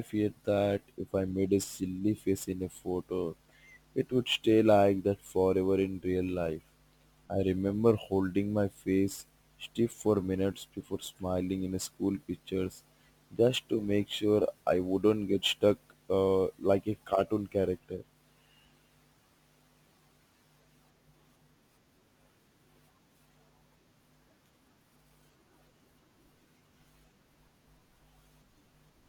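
Throughout, crude rate conversion repeats samples without filtering, which fits a 44.1 to 48 kHz change, adding inharmonic fizz roughly 30 dB below the speech.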